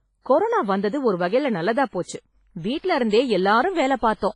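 Speech, heavily degraded throughout by what is likely WMA compression: the audio rings and sounds washy, with a hiss that swells and fades with the signal and nothing above 10.5 kHz, which fits a low bitrate near 24 kbps zeroing weak spectral detail.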